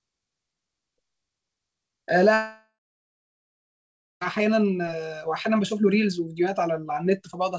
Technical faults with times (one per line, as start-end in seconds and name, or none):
2.34-4.23 long network dropout